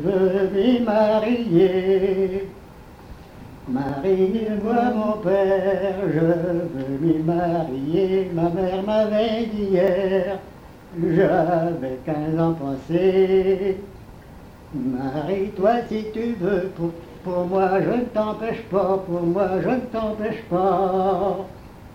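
At 3.89, 9.88 and 15.86 s the sound skips forward by roughly 15 ms, at a steady 6 s spacing. This is likely audio missing between chunks, lost at each handover. A waveform shows abrupt joins, and a spectrogram shows thin vertical seams.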